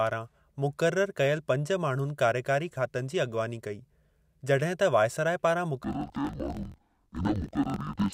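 The clip is speech, and from 5.84 s to the end at 8.14 s it drops an octave, sounds doubled and turns choppy. That is interleaved audio read as planar. Each 21.33 ms block of alternating left and right samples is split in half, which fits a 1024-sample block, and both halves play at half speed. That gives the 12-semitone fall while the pace stays the same. A plain resampling error would also slow the timing, and this fault leaves the timing intact.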